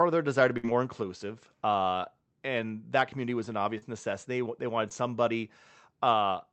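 At 0.57 to 0.67 s the sound freezes into a stretched, fading continuation and then jumps ahead. This is a burst of packet loss: about 60 ms of audio never arrived in time, so the receiver extended the last sound for 58 ms while turning it down, then resumed past the gap.

After "community was an", at 3.78 to 3.85 s, there is a brief smear, and after "they wanted", at 4.89 to 4.92 s, a quicker wobble. Both are short concealed packet loss. About 40 ms and then 20 ms were lost, and the receiver filled each hole by continuing the preceding sound before blending back into the real audio.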